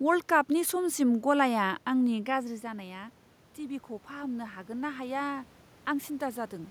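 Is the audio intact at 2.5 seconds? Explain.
No. At 2.5 seconds the clip is inside an automatic gain rise that runs from 2.30 to 5.55 s. Just before it, around 2 seconds, the talker moves back and the level at the microphone drops by about 13 dB. The gain control reads this as a weak input and slowly raises its gain, by about 5 dB over those three seconds. The speech and the room noise swell up together.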